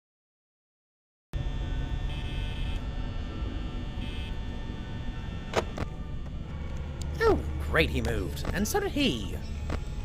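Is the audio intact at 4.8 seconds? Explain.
Yes, the audio at 4.8 seconds is intact, with no dropout, click, distortion or other fault audible at that point.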